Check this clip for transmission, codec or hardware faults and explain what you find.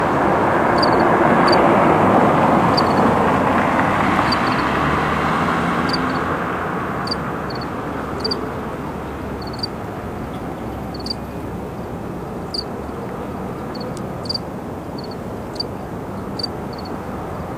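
No transmission, codec or hardware faults can be heard anywhere in the audio.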